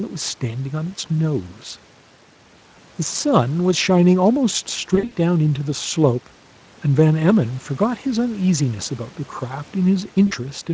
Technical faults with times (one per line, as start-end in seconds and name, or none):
4.95-5.14 VoIP packet loss concealed by the speech codec
10.27-10.33 VoIP packet loss concealed by the speech codec